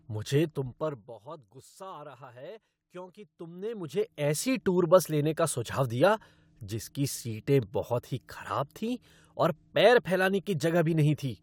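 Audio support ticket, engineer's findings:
Zipper noise, 0.43–1.24 s. Ticking over the speech during a fade of about 20 dB down. Gain stage applying unsmoothed 2 dB steps, roughly 20 per second, each step clicking.

Zipper noise, 3.24–4.57 s, starting after "रहा है क्योंकि". Same zipping during a rise of about 20 dB. 2 dB increments at roughly 10 per second, no interpolation between steps. Same gain control suspected.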